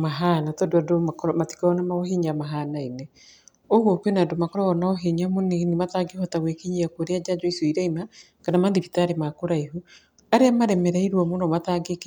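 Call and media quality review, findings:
No audible faults found in the speech path; nothing to escalate.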